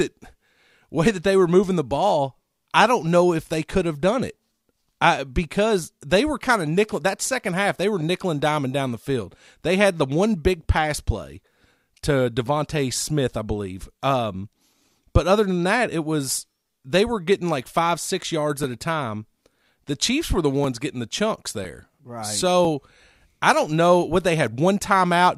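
Periodic USB or driver dropouts run from 17.64 to 22.65 s: roughly every second, something stalls the audio path and a couple of milliseconds of the speech are skipped outright, about seven times, leaving evenly spaced ticks that fall only where there is signal.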